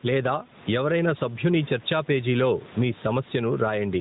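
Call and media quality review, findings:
Gain pumping throughout. Gain swing of around 10 dB. Likely an over-high input gain driving a fast limiter/compressor. Distinguished from room-noise variation: the lift tracks the speech envelope, not the room. Sound is narrowband, nothing above 3.9 kHz, consistent with AMR-NB at 12.2 kbps.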